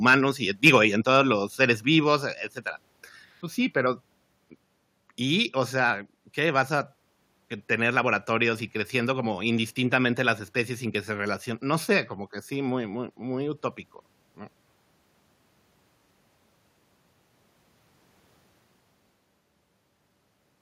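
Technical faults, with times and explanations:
0.06–0.14 s, 0.65–0.76 s and 1.12–1.16 s, microphone overload: the loudest bits at the start get a harsh, crackly edge, right before "y en" and again between "y en" and "los seres". The likely cause is input gain set too high, so the peaks run into the converter's ceiling (about 4, 6 and 2 dB over) and get flattened. Only a small slice of samples is hit each time, so it's brief grit, not continuous fuzz.
1.02 s and 2.04 s, microphone volume stepped down: the whole level, voice and background alike, suddenly sits lower, by about 3 dB the first time and about 2 dB the second, just after "los seres". It's likely the call software reacting to those clipped peaks by cutting the mic's input gain in a single notch. That explains why each drop follows soon after the distortion.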